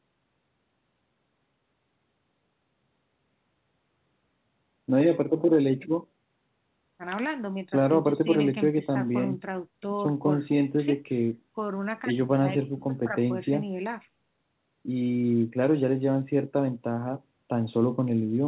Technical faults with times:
none

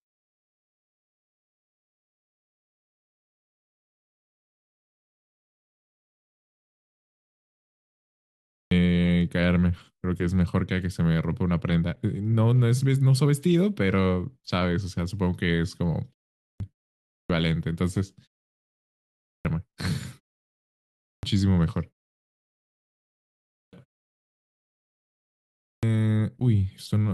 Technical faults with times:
8.52-8.71 clipped start after a pause
16.39-16.60 clipped start after a pause
17.08-17.30 clipped start after a pause
19.23-19.45 clipped start after a pause
21.01-21.23 clipped start after a pause
23.53-23.73 clipped start after a pause
25.61-25.83 clipped start after a pause

